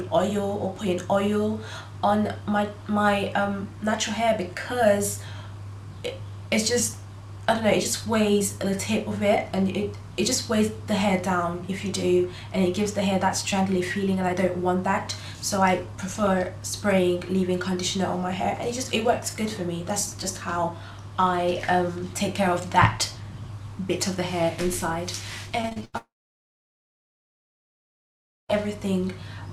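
Repeated packet loss (robotic sound) runs from 25.61 to 25.95 s. Over this third of a second the stream breaks up into about five short holes, the longest around 86 ms. Each hole is patched by stretching the sound that came just before it, so nearly half the span is filled-in material. The result is choppy, with small pieces of audio missing between the patches.

A long network dropout follows at 25.97 s and lasts until 28.51 s. The sound briefly smears into a fading continuation of the last fragment. After that, about 2.4 s of silence remains before the audio returns, and nothing from that stretch is ever heard. The likely cause is a complete break in delivery: no audio arrived for roughly two and a half seconds, and the receiver had nothing to play.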